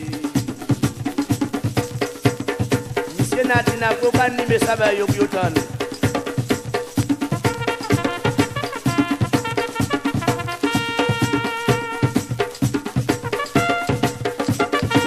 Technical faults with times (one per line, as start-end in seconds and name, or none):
none